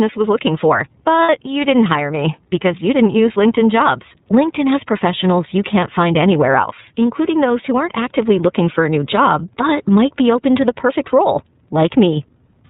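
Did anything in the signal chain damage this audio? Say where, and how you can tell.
Yes. The damage happens at the codec stage: the whole clip has been through the iLBC codec. The audio is band-limited to narrowband, with nothing above 4 kHz, and the speech has a plainly audible rough, slightly synthetic texture throughout. That comes from coding the excitation of each 30 ms frame independently, which fits iLBC's 13.33 kbps mode. Fine detail is lost and replaced by a coarse approximation.

A second fault sits at the network stage: lost iLBC frames from 1.23 to 1.29 s. For those 60 ms the speech turns into a held, faintly buzzy vowel-like tone, which fits two lost 30 ms frames. The decoder filled the gap by repeating the last pitch cycle with added noise. Because iLBC frames decode independently, the speech returns almost immediately after 1.29 s.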